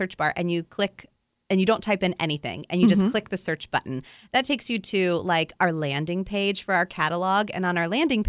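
Nothing in this bit of speech trips any alarms; there's no fault to point to anywhere along the way.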